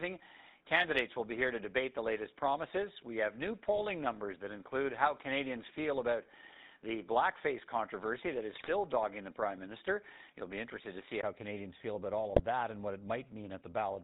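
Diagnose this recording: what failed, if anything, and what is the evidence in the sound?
Codec stage: the whole speech clip has the buzzy, gravelly roughness of the GSM full-rate codec, which fits 13 kbps. Its pulse-driven vocal-tract model leaves nothing above 4 kHz.

Capture stage: up to 11.23 s the sound is duller, then clears after a 20 ms gap with no real level jump. That points to an input switched to a poorer device, likely.

Network stage: GSM bit errors cause squawky, gargling bursts at 8.52 to 8.71 s and at 12.36 to 12.43 s, between "feel about all" and "that and what it". Corrupted filter, pitch and gain values distort those frames.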